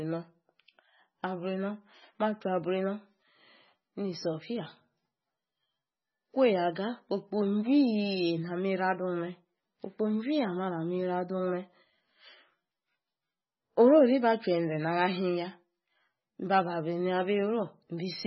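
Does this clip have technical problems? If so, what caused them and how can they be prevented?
Yes. The speech sounds watery and swirly throughout, with nothing above 5.8 kHz. This is likely heavy MP3 compression at a very low bitrate, around 16 kbps, which cuts the treble and drops weak frequency detail. Prevent it by encoding at a much higher bitrate or keeping the audio in a lossless format.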